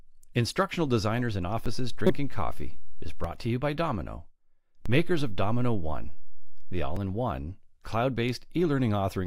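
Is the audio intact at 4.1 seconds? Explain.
Yes, at 4.1 seconds the audio is intact, with no dropout, click, distortion or other audible fault at that point.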